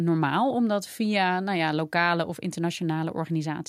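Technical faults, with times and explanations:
No technical faults are present in this speech recording; the signal carries through without any audible defect.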